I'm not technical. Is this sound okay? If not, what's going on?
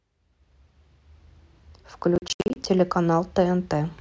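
No. From 2.15 to 2.66 s there is processor overload crackle: the computer handling the audio fell behind and missed a run of deadlines for delivering its small chunks of sound. Each miss dropped in a short gap of silence with hard edges, and around fifteen of them in half a second add up to a gritty crackle over the speech. The spacing fits chunks of roughly 20 ms each.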